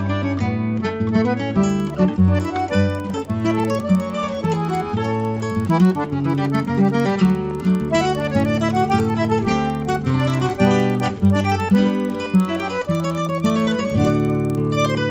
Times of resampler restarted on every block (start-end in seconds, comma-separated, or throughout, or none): 1.55-15.11